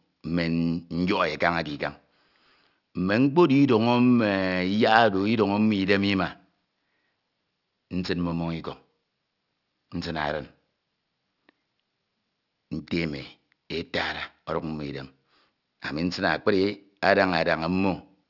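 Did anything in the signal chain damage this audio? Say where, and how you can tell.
Yes, aliasing at the sample-format conversion stage: sibilants sound gritty throughout, folding back about 25 dB down from 6 kHz, which fits an unfiltered resample to 12 kHz.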